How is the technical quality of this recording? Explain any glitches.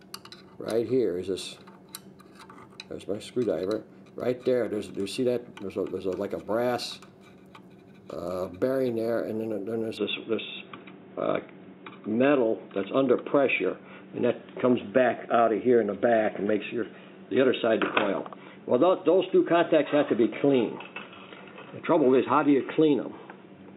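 The recording has one clear fault, from 9.98 s to the end: the input likely switched to a poorer device. At that moment the sound turns dull and boxy, with nothing above 3.8 kHz, and it shifts in level by roughly 5 dB and gains a faint new noise floor about 40 dB below the signal. The change is abrupt, with no silence at the join. A narrower microphone path takes over, with its own band, gain and noise. That combined jump in tone, level and background noise at one instant is what separates it from a codec or filter simply narrowing the bandwidth.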